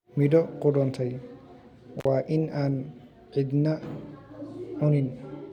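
At 1.99 s the speech drops out abruptly, with crackle at both edges and only faint hiss left underneath, before returning at 2.07 s just ahead of "waa in aan". This is intermittent contact: a loose cable or plug briefly opened the signal path for about 51 ms.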